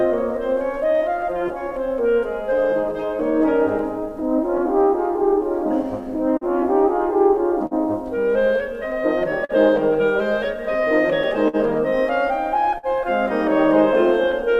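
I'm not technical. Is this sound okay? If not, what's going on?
No, not quite. This music has three related problems.

There's clock drift between sender and receiver: the sending device's clock runs a few percent slow compared with the playback side. The music arrives a touch too slowly the whole way through, so the receiving end keeps running short and has to compensate.

Those fixes are repeated timing corrections, from about 0.85 s to 14.43 s. The receiver keeps stretching out tiny bits to stay in step, so playback runs at about 98% speed and adds around a fifth of a second overall. You might notice a slightly wobbly tempo.

On top of that come scattered short gaps, between about 3.79 s and 14.36 s. Roughly fifteen small bits didn't arrive in time, and each was patched by extending the sound just before it. The longest is only a few hundredths of a second, heard as brief ticks or smears.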